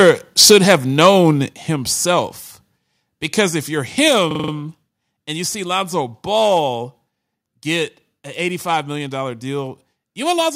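From the very start to 0.11 s, and again from 0.39 to 1.3 s, the loudest peaks sound flattened and crackly. This is microphone overload, likely from an input set too hot. The tops of the waveform hit the converter's ceiling, by about 4 dB and then about 6 dB.

At 0.52 s the level drops suddenly by about 2 dB. Further steps follow at 1.53 s, about 4 dB, and at 4.08 s, about 3 dB. This is the microphone volume being stepped down, likely by call software reacting to the clipping. Voice and background fall together.

From 4.31 to 4.52 s a short piece of sound repeats exactly five times. It comes back every 42.67 ms, a stutter at 23.4 Hz. This is a system hang loop. The hardware kept replaying its ring buffer while the system stalled, which fits a 2048-sample buffer. Almost no audio is lost.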